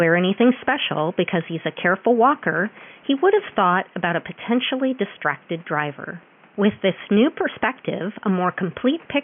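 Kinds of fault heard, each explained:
Gain pumping: Throughout the speech, the level of the background rises in each pause and sinks again under every loud syllable, a swing of roughly 5 dB. The room noise, about 32 dB below the speech, is what makes the breathing audible. The likely cause is input gain set far too high, with a fast limiter hauling it down on each peak and squashing loud and soft parts together. Unlike a noise gate, which cuts the background off, the background here swells back up in each gap.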